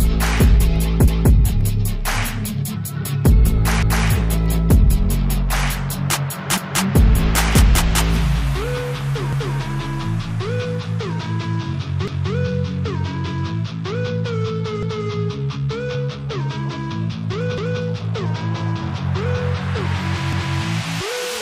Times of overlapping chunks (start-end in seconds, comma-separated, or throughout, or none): 1.08-1.33, 3.83-4.08, 6.58-6.83, 9.33-9.58, 12.08-12.33, 14.83-15.08, 17.58-17.83, 20.33-20.58